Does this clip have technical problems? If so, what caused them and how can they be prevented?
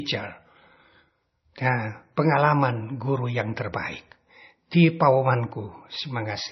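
Yes. Throughout, the speech sounds dull and watery, with swirling, metallic chirps on s sounds and nothing above about 5.9 kHz. This is likely MP3 compression at heavy settings, fitting a very low bitrate near 24 kbps, where the encoder cuts treble and drops weak frequency lines. Encoding at a higher bitrate or using a lossless format prevents it.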